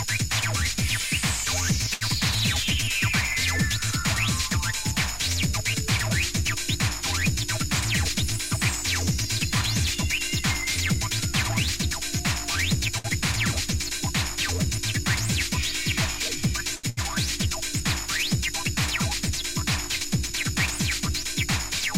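Short stalls from late packets occur at 1.94 to 2.03 s, 12.98 to 13.06 s and 16.76 to 16.85 s. In each, a packet arrived late, the jitter buffer ran dry, and the receiver stretched the last sound by 72 ms, 63 ms and 74 ms respectively. The sound is held with a slight buzz or dip, then continues exactly where it left off. Unlike packet loss, nothing is skipped.

A jitter buffer speed-up runs from 7.69 to 11.99 s. The buffer had built up extra delay, so the receiver trimmed tiny pitch-period slices again and again, playing at 101% speed and removing about 50 ms in total. Pitch stays the same, which separates it from a resampling error. At 101% it stays below the speed where audio starts to sound hurried.

A burst of packet loss follows at 16.89 to 16.99 s, immediately after the third stall. About 100 ms of audio never arrived. The receiver filled 73 ms by extending the last sound and letting it fade to a buzz or hiss, then jumped ahead. 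The stalls only pause the audio, but here a piece of it is gone.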